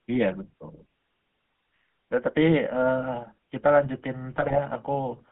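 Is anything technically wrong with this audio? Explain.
Yes. The whole recording has passed through the GSM full-rate codec. That coder keeps only a model of the vocal tract and drives it with a sparse, regularly spaced pulse excitation, discarding two samples in three, and the channel is band-limited to roughly 150 Hz to 3.5 kHz, which fits the 13 kbit/s full-rate coder. The result is a plainly audible buzzy, gravelly roughness over the speech, with no brightness above the top of that band.

From 4.32 to 4.59 s there are GSM bit errors. Corrupted bits reached the decoder, so the filter, pitch and gain parameters it rebuilt for those frames were wrong. The spectrum bends and the level jumps from frame to frame, and the speech briefly breaks into squawks, pops and a gargling texture. The damage spans about a quarter of a second, covering 13 corrupted frames, with an error rate near 2 percent.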